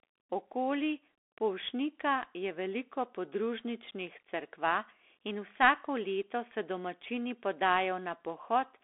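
From start to finish the speech sounds thin, boxed-in and scratchy: s sounds come out rough, louder bright moments smear into distortion, and a grainy hiss sits underneath. Nothing reaches past 3.8 kHz, with the useful band running from about 300 Hz to 3.5 kHz. This is the Bluetooth CVSD headset codec, which fits a 64 kbps link encoding one up-or-down bit per sample; its adaptive step can't keep pace with fast, loud high content, so the waveform is crudely approximated.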